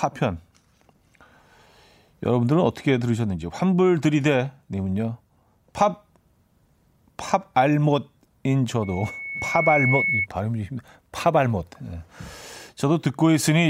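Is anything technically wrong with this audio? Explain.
Yes. Loudspeaker feedback squeal runs from 8.82 to 10.27 s: the microphone picks up its own loudspeaker, and at 2.2 kHz the loop gain passes one, so that tone feeds itself. It swells over about a second into a piercing whistle roughly as loud as the speech.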